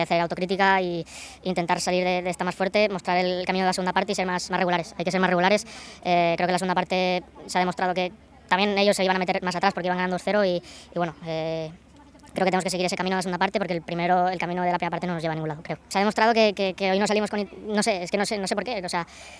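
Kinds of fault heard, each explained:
Wrong sample rate: the audio plays back faster than it was captured, with no rate conversion, so speed and pitch rise together throughout. Everything runs about 1.38 times too fast and sits about 5.55 semitones high, which fits 16 kHz material played at 22 kHz. On a spectrogram every feature is stretched upward by that ratio, and the band edge climbs from about 8 kHz to about 11 kHz. The waveform looks compressed in time.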